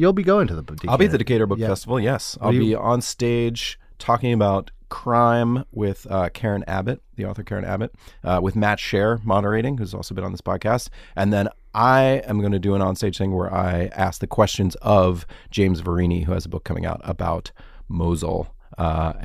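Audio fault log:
No faults are heard in this speech recording. There is nothing to log.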